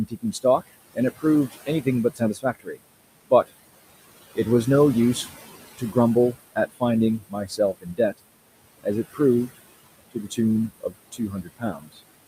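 Noise suppressor artifacts run through the whole clip. The room noise sits about 16 dB below the speech. Between phrases the suppressor pushes it down by about 19 dB. Under speech it swells back.

Speech cut by the noise suppressor occurs at 0.08–2.8 s, 6.33–6.82 s, 7.19–8.19 s, 8.84–9.5 s, 10.11–10.38 s and 10.7–12.0 s. The suppressor treats quiet speech as noise. Brief pieces drop by up to about 21 dB and sound faint or swallowed.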